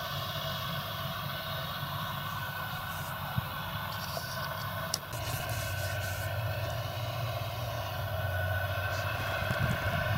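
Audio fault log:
9.16–9.94 s processor overload crackle: the processor keeps missing its deadlines, leaving dozens of tiny silent gaps with hard edges. Their spacing points to buffers of around a millisecond and a half. The waveform shows many brief near-silent notches, and the spectrogram shows dense vertical broadband streaks.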